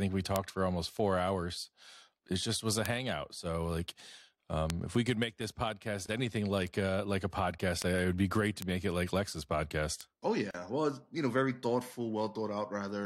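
A speech clip with two kinds of digital fault. Six bit error spikes give single sharp ticks at 0.36, 2.86, 4.70, 7.82, 8.62 and 10.01 s, the one at 7.82 s falling between "uh like a" and "it would be great". Each is a flipped bit. One to three samples jump by a power of two and snap back. The tick is broadband and unrelated to the voice. Two gaps at joins of encoded pieces also appear. The sound drops out for about 25 ms at 6.06 s, after "could make this podcast". It drops out again for about 37 ms at 10.51 s, before "well it's you know". The pieces were encoded separately and joined untrimmed. Encoder delay and last-frame padding leave brief silences with smeared edges. The speech then resumes where it stopped.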